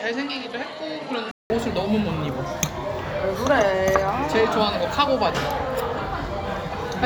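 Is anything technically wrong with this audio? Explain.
Yes. From the start to 1.5 s, the recording path was likely on a different, poorer capture device, an input switched to a poorer device, before changing over. That input passes nothing above 11.4 kHz, so this opening stretch of everyday sound is duller and a few decibels quieter, with a faint background hiss well below the signal. At the changeover near 1.5 s, a gap of about 0.19 s drops out before the fuller, brighter sound arrives.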